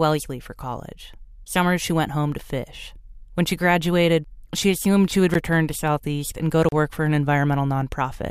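At 5.34 s, after "she assumed she would", a block of digital silence about 12 ms long (which fits a 512-sample buffer) cuts the speech out with no fade, giving a sharp tick. A second 35 ms block, 6.69 to 6.72 s after "and go to", is heard as a short hole.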